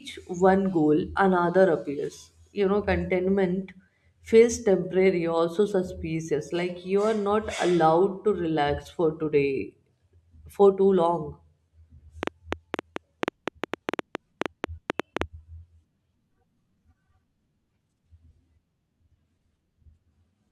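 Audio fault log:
12.23–15.23 s, train of clicks: about twenty alike pops, unevenly spaced near 7 per second, well above the speech; likely pulses from interference or a faulty connection.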